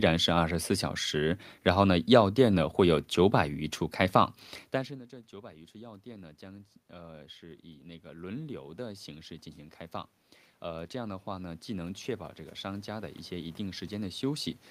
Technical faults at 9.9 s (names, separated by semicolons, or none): automatic gain rising